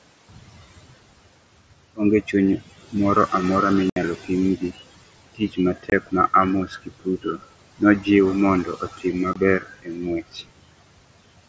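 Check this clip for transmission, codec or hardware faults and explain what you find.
Three faults are audible: a noise suppressor working throughout, speech it mistakes for noise in four stretches, and three unconcealed Bluetooth headset packet losses.

Noise suppressor artifacts run throughout. The suppressor pulls background it judges steady down by about 21 dB frame by frame, so the residue pumps between phrases and rises under the speech.

Speech cut by the noise suppressor occurs from 0.29 to 2.95 s (ending just before "moro amora"), 4.15 to 6.33 s, 6.66 to 8.07 s and 8.64 to 11.47 s. The suppressor treats quiet parts of the speech as noise and drops them by up to about 22 dB. Roughly a second is swallowed in each of the first three stretches and about two seconds in the last, leaving those parts faint.

Unconcealed Bluetooth headset packet loss occurs at 3.90 s (just after "moro amora"), at 5.90 s and at 9.33 s. 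Packets between headset and phone were dropped and replaced with nothing, leaving abrupt holes. The first lasts 67.5 ms, and the other two last 22.5 ms each.

Over the mSBC headset link, nothing passes above 8 kHz.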